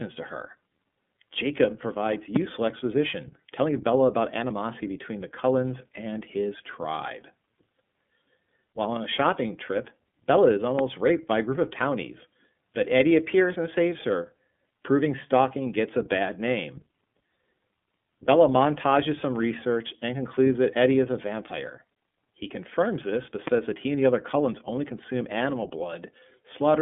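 Speech that's been squeezed through the iLBC codec for the whole clip. It sits in a narrow phone-line band of roughly 150 Hz to 3.5 kHz with nothing above 3.8 kHz, and it has that plainly audible rough, slightly synthetic edge. The frame-by-frame grain fits iLBC's 30 ms, 13.33 kbps mode. On top of that there are three loud pops, each a single sharp hit about 15 dB over the speech, which carries on underneath. They land at 2.36 s just before "exposition telling", at 10.79 s just before "raped by a group", and at 23.47 s between "confirms this but" and "that he and the". They're most likely voltage spikes from a switch, static or a driver glitch.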